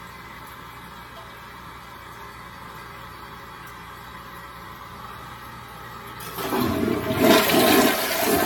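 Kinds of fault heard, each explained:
Generation loss: The sound is swirly, smeared and hollow throughout, with blurred attacks and nothing above 17 kHz. It was likely re-encoded about ten times, fitting AAC-LC at 96 kbit/s. Each pass quantised on a shifted frame grid, so noise and spectral holes accumulated.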